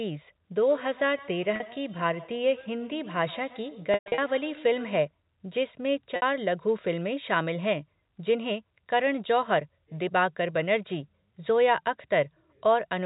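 From 0.7 to 5.11 s there is feedback echo between two devices: a second device replays the far end and its microphone sends it back. Each syllable returns roughly a tenth of a second later, at most about 21 dB down, thin and ringing, seen on a spectrogram as faint, evenly spaced copies trailing each harmonic stack.

Packet loss with pitch repetition occurs at 1.56 s (40 ms), across 3.94 to 4.18 s (200 ms scattered over 240 ms, longest run 120 ms) and at 6.16 s (60 ms). The brief gaps sound like a held, buzzy note, shown as a short run of identical repeated cycles in the waveform. The longer run fades into silence before speech cross-fades back, leaving a flat, blank strip on the spectrogram under the telephone-band 4 kHz ceiling.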